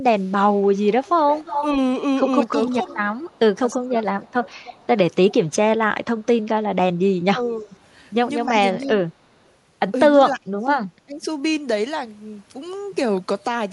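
From 0.16 to 1.64 s there's an echo leak. A copy of the speech trails about 293 ms behind, only about 10 dB below the main signal. That's likely the far end's echo canceller letting its loudspeaker pickup slip back down the line. The same delayed copy returns more faintly at 2.67 to 3.74 s (about 25 dB down) and at 4.58 to 5.34 s (about 20 dB down).

Speech suppressed in double talk hits at 2.68 to 2.74 s, 3.75 to 4.56 s, 7.36 to 7.72 s, 8.82 to 9.09 s and 10.17 to 11.26 s. The talker's level sags, from a slight dip of about 5 dB to nearly gone at about 30 dB. The deepest holes are at 10.17 to 11.26 s and 3.75 to 4.56 s. This is likely the canceller ducking everything while both sides overlapped.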